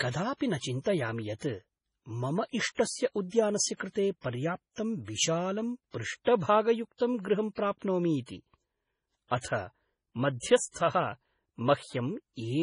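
Throughout, the speech sounds watery and swirly, with heavy smearing and nothing above 10.6 kHz, likely MP3 compression at a very low bitrate, around 24 kbps. From 0.73 s to the end, a hiss and roughness rides on louder, brighter passages: sample clock jitter, with timing wobbling by several microseconds and leaving an error about 25 dB below the signal.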